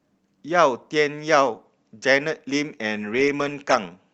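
Nothing goes wrong anywhere in this bit of speech; there's no technical fault to point to at any moment.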